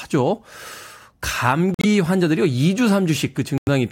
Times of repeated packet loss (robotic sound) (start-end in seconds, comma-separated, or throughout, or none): none